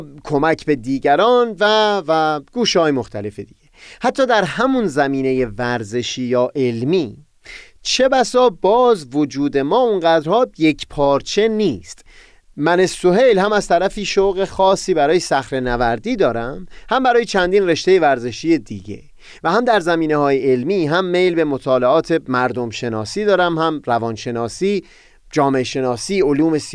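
No technical faults are audible.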